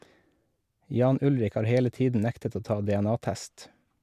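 No technical faults can be heard anywhere in the speech recording. There is nothing to mark at any point in the timeline.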